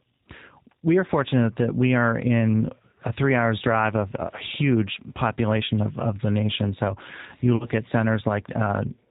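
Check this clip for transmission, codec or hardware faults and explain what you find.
Two faults are present: codec coding runs through the whole clip, and a short concealed dropout occurs near the end.

G.729 codec, throughout: the speech is rebuilt from a vocal tract filter, a pitch predictor and sparse pulses, at a rate that fits 8 kbit/s. Nothing above 4 kHz passes, and the plainly audible coding leaves the speech rough and synthetic.

VoIP packet loss concealed by the speech codec, 7.56 to 7.67 s: about 40 ms of audio went missing, consistent with two lost packets. The decoder extended its last pitch and filter at falling gain, and the effect lingers beyond the gap because each frame builds on the previous one.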